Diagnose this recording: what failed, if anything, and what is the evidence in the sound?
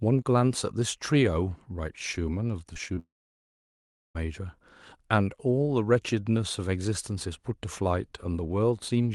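The network side is where this starts to come apart. Right around 2.73, 2.88 and 2.95 s you get three quick smears in the speech, each roughly one 20 ms packet's worth that never showed up in time. That's short concealed packet loss: the decoder bridged each hole by stretching the previous bit of sound, then crossfaded back into real audio. Through a call path that sounds like Opus at around 32 kbps, those patches come across as little wobbles.

Then at 2.99 s it falls off a cliff, and nothing real comes back until 4.17 s, so you lose about 1.2 s outright. That's a long network dropout. The concealment keeps extending the last sound as a buzzy tail that fades out fast, and then for about a second there's just silence before the speech picks up again further along, with that whole stretch simply gone. The cluster of small losses right before it makes a likely culprit of a network stall that built into a full outage.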